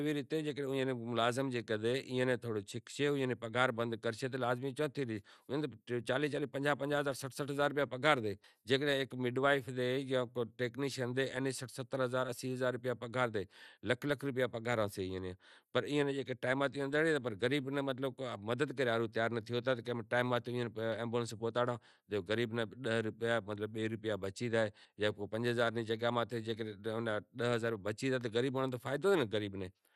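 Throughout, the speech sounds dull and gurgling, with nothing above 13.7 kHz, likely MP2 compression starving upper sub-bands of bits, which fits roughly 80 kbps.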